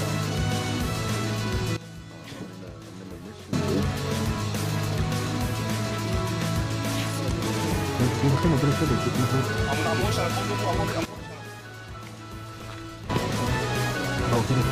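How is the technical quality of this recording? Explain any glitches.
The recording has two sudden gain jumps. From 1.77 to 3.53 s the level drops by about 15 dB, and from 11.05 to 13.10 s by about 13 dB. Sound and background noise fall together, which points to a likely unramped digital gain change. The waveform shows abrupt rectangular steps in envelope, and the spectrogram shows uniformly dimmed bands with sharp vertical edges.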